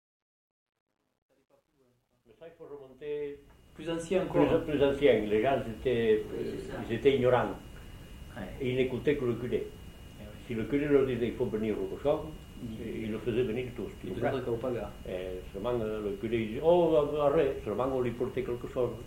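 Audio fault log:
0.0 to 4.4 s, truncation distortion on a fade: the fade-in starts gritty, worst before 2.8 s, because the low levels collapse into a few coarse undithered steps, which fits about 11-bit resolution; it's clean by the time it reaches full level at 4.42 s.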